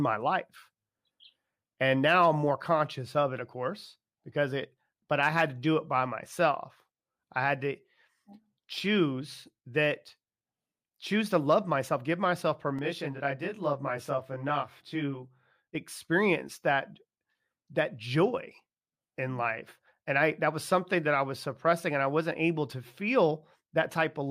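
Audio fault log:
12.79–15.75 s, channel delay (comb filtering): one channel lags about 20 ms and sums to mono, carving evenly spaced notches from near 20 Hz, so the speech sounds rough and slightly doubled between "love myself give myself" and "experience that".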